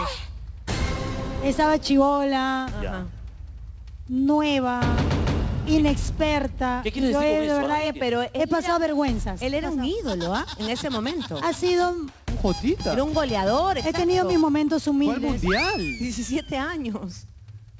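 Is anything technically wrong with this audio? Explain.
No, nothing's wrong here; it just sounds like a normal call, with the band topping out around 8 kHz the way a wideband codec like G.722 at 64 kbps would leave it.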